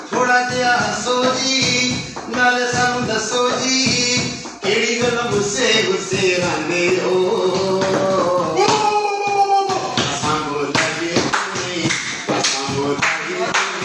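From start to finish there's a 50 Hz buzz riding on the audio: the resampler restarted on every 20 ms block, likely a 48 kHz to 24 kHz conversion, leaving errors at each block edge.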